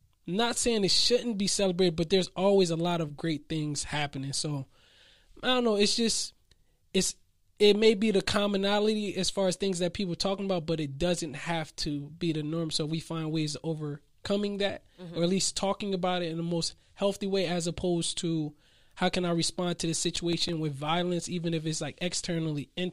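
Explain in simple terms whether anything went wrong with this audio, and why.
Something did go wrong near the end of this speech clip. From about 20.05 to 20.53 s, right after "I respond to the" and just before "with violence even if", there's a burst of processor overload crackle. The computer got too busy to hand over its small chunks of audio on time, and several in a row came out as silence. Those tiny dropouts, a few milliseconds each, stack up into a gritty tearing sound that clears once the load drops.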